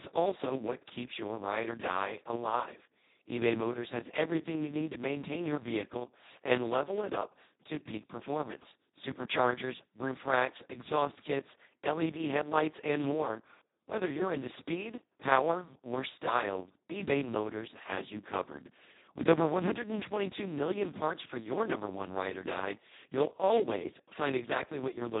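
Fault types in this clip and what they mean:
Speex codec: This speech went through Speex at a very low setting, which fits a rate of around 2 kbps. The excitation is starved, so the voice comes out noisy, hoarse and near robotic, with nothing above 3.8 kHz throughout.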